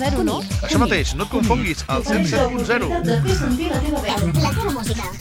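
From 4.09 s to the end at 5.20 s there is a section at the wrong speed: the audio jumps to 1.34 times its proper rate, so pitch rises by about five semitones along with the tempo. It sounds suddenly hurried and higher, likely from playback against a mismatched clock.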